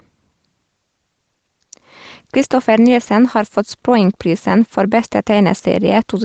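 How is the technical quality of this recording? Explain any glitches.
The recording has one fault running through the whole clip: gain pumping. The level swings by roughly 5 dB. The cause is likely input gain set far too high, with a fast limiter or compressor clamping down on every loud syllable and releasing in the gaps. Loud and quiet passages sit unnaturally close in level, giving a squashed, breathing sound. A noise gate would behave the other way, cutting the background toward silence in the pauses. The clip also carries the band limit of a call path, with nothing above 8 kHz.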